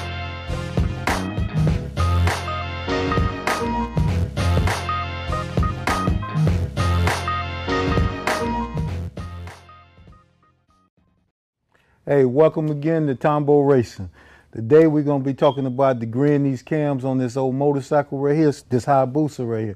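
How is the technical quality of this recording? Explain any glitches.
No glitches can be heard anywhere in the recording. The audio runs without any dropouts, distortion or other technical faults to point to.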